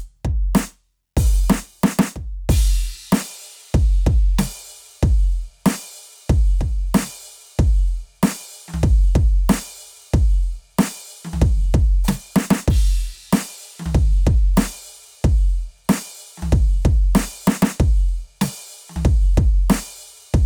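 No technical faults can be heard anywhere in this music.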